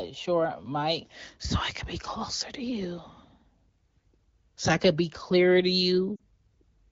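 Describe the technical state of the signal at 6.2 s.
At 6.2 s there are lost AMR speech frames, from 6.16 to 6.21 s, just after "could be clearer to". The decoder repeats its last good speech settings at falling gain. The speech briefly drops to near silence. The 40 ms gap fits two dropped frames.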